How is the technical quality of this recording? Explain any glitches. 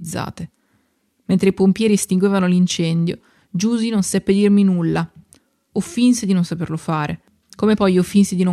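No glitches or technical faults can be heard anywhere in the recording. The speech runs without any dropout, click or interruption from beginning to end.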